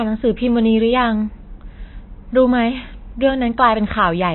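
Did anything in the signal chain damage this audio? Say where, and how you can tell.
Yes, at the codec stage: the speech sounds watery throughout, with nothing above 4 kHz, likely MP3 compression at a starved bitrate around 24 kbps, cutting treble and flickering weak bands.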